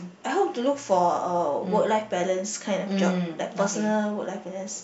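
From 0.75 to 2.24 s, mains hum sits under the speech: a steady 60 Hz tone, well below the speech level, as power-line current leaks into the signal path. A spectrogram shows a thin horizontal line at 60 Hz; the waveform carries a low ripple.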